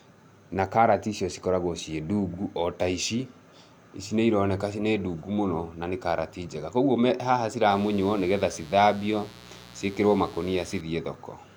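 From 7.70 to 10.81 s, mains buzz sits under the speech. It is a steady, raspy buzz built on 60 Hz harmonics climbing into the kilohertz range. Switching spikes from poor shielding or a dimmer leak in twice per cycle. It runs well below the speech level.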